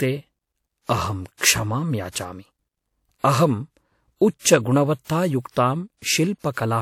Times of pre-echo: 1.38-1.41, 5.02-5.08

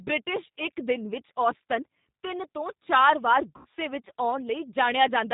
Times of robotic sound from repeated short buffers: none

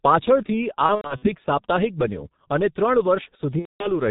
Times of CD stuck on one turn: none

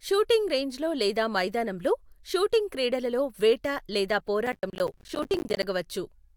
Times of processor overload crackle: 4.47-5.63

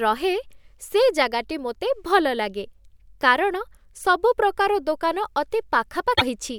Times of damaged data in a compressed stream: 6.13-6.22

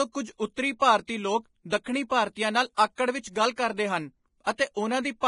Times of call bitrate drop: none

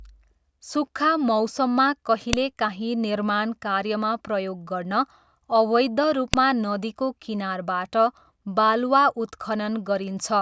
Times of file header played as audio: 2.33, 6.34

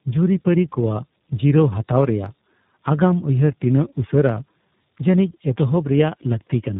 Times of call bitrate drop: none

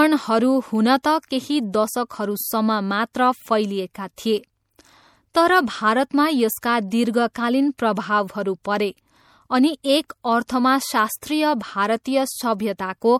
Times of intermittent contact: none

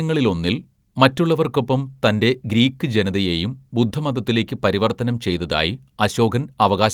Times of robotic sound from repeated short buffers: none

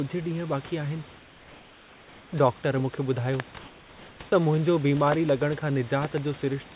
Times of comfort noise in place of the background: 1.18-2.32

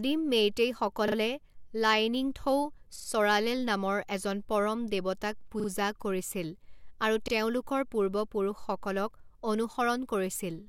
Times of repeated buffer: 1.08-1.16, 2.96-3.08, 5.60-5.68, 7.28-7.32

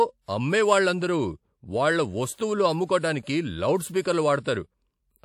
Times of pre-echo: 2.35-2.38, 2.87-2.89, 4.02-4.05, 4.43-4.46

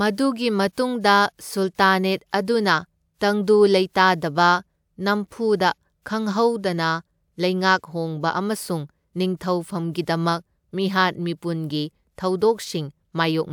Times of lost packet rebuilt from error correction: none

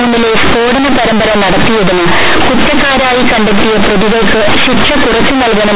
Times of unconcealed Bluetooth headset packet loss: none

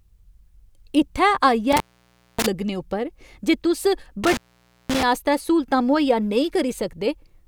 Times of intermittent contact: 1.72-2.46, 4.24-5.03

